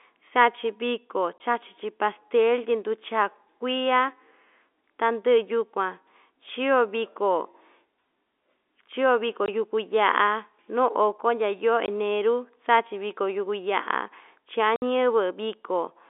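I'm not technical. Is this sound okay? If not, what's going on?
No. You can hear packet loss filled with silence. The speech drops out briefly at 1.38–1.40, 9.46–9.48 and 11.86–11.88 seconds, and for longer at 14.76–14.82 seconds. Small chunks of the call went missing and were replaced by silence, so each gap starts and stops abruptly.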